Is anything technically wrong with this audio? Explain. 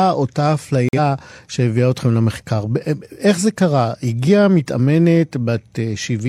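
Yes. A corrupt frame was muted between 0.89 and 0.98 s of this speech clip. Flipped bits left one compressed frame undecodable, so the player substituted silence for its full length. Everything after it stays in time. The 95 ms hole cuts in abruptly, which fits the loss of a single frame. On a waveform it appears as a sharp-edged flat line. On a spectrogram it is a clean vertical blank across all frequencies, with hard edges on both sides.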